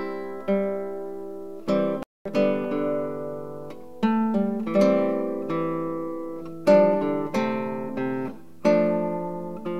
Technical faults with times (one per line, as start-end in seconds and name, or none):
2.03-2.25 playback stall